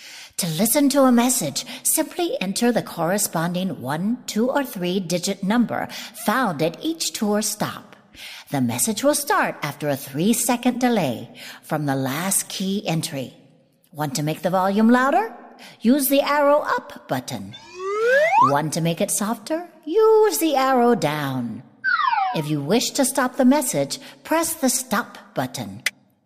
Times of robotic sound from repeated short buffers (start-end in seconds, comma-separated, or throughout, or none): none